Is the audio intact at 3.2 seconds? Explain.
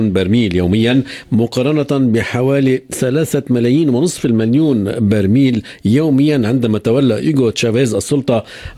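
No. Clock slip clicks run from 0.15 s to 8.75 s, so 3.2 s falls inside them. The likely cause is two devices running on separate, unsynchronised clocks that differ by roughly 400 ppm. Each time that mismatch builds up to a whole sample, one sample is dropped or repeated, about every 0.05 s, around two hundred times in all. The result is a steady ticking at roughly twenty per second.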